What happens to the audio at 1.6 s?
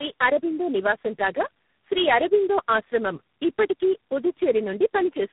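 At 1.6 s you're hearing tandem speech coding, and it isn't a one-off: it runs through the whole clip. The speech went through three codecs in a row: AMR-NB at 5.15 kbit/s, AMR-NB again at 10.2 kbit/s, then G.726 at 24 kbit/s, with G.711 hops in between. Each stage recodes the previous one's damage, so the speech comes out rough, muffled and warbly, with nothing above about 3.8 kHz.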